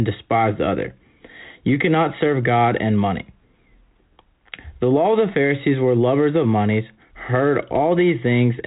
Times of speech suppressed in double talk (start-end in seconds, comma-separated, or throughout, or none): none